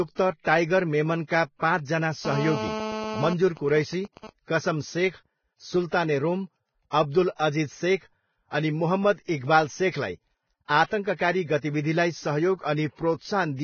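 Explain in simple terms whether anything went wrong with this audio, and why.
Vorbis compression, heard throughout the whole clip: the speech sounds hissy and grainy, with nothing left above 6.6 kHz. Squeezing the file very hard is the likely cause. The codec cut off the treble and turned fine detail into noise, blurring the starts of sounds.

GSM phone buzz, from 2.25 to 3.33 s: a hard, raspy buzz at 217 Hz sits under the speech. A nearby 2G phone on a call sent radio pulses 217 times a second, and the audio circuit turned those pulses into sound.

GSM signalling bursts, from 3.33 to 4.30 s: the buzz changes to even ticks with a longer buzz twice a second. The same phone was still on the call, but its user had gone silent, so it sent only short groups of radio bursts.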